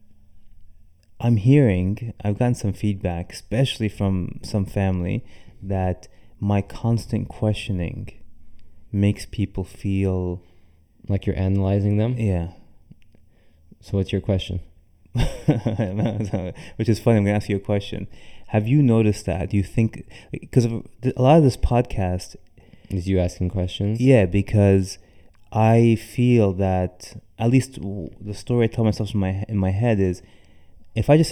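From start to finish, the speech has channel delay (comb filtering): one channel trails the other by roughly 0.4 ms, and summing them to mono cancels evenly spaced frequencies from about 1.5 kHz upward, giving a hollow, phasey tone. The notches stay fixed rather than sweeping as in flanging.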